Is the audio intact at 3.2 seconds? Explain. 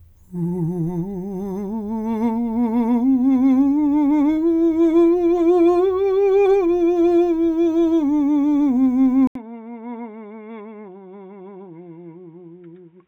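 Yes, the music plays through cleanly at 3.2 seconds with no audible fault at that moment.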